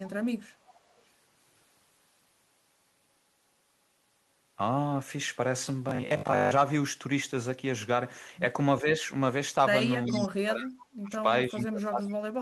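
Speech with three kinds of fault. An echo leak appears at 0.65 to 0.8 s, 0.98 to 1.02 s and 10.06 to 10.26 s: a delayed copy of the talker returns 395 ms late. It is faint in the first two spots, roughly 30 and 40 dB below the speech, and much more prominent in the third, about 15 dB down. The likely cause is a far end on loudspeaker whose echo canceller let part of its microphone pickup through and sent it back. From 5.89 to 6.53 s the sound turns into a rigid, metallic 50 Hz buzz that still loosely tracks the speech. This is robotic sound from repeated short buffers: with new audio arriving too slowly, the same slice is looped and most of the real signal in that stretch is lost. The 50 Hz pitch fits a 20 ms repeat, and the likely cause is late packet delivery concealed by buffer repetition. Speech suppressed in double talk shows up three times. At 8.81 to 8.88 s there is a brief dip of around 5 dB. 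From 10.08 to 11.27 s the level drops by as much as about 35 dB for roughly a second, overlapping the loudest echo. From 11.49 s to the end the speech is pulled down by around 30 dB. These dips are likely the echo canceller treating overlapping talk from both sides as echo and attenuating the near talker along with it.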